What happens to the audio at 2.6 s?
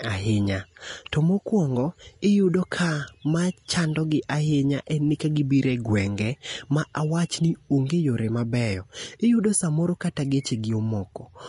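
At 2.6 s the speech, like the whole clip, has nothing above 10.6 kHz, and its treble turns hissy and grainy, likely from Vorbis compression at a low bitrate near 35 kbps. Coarse quantisation replaces fine detail with noise, unlike a clean low-pass filter.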